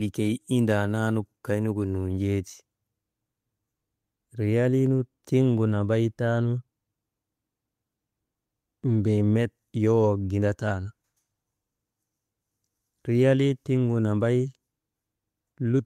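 No technical faults are audible.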